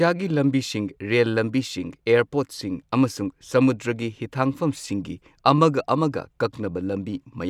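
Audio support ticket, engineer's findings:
No fault found in the speech clip on listening. No component or mechanism flagged for follow-up.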